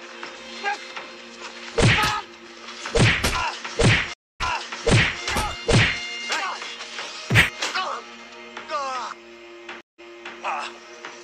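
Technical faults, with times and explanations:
4.14–5.21 s and 9.81–10.38 s, stream reconnect: the connection drops and the player goes silent for 263 ms and 172 ms, then restarts its decoder and repeats 813 ms and 395 ms of earlier audio. The waveform shows a flat gap, then a brief fade-in.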